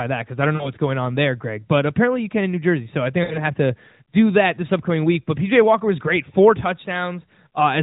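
Lost AMR speech frames at 0.56 to 0.72 s and 3.24 to 3.43 s in this narrowband mobile speech recording: the decoder bridges roughly 40 ms and 60 ms gaps, consistent with two and three dropped 20 ms frames, by repeating the last good pitch and vocal tract settings at falling gain, so the sound smears briefly, then dips before recovering.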